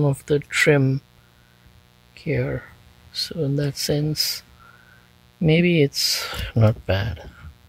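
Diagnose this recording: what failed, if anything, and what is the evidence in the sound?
Analogue wiring let mains buzz in: switching spikes from a 60 Hz supply add a raspy buzz, rich in harmonics, about 35 dB below the sound throughout.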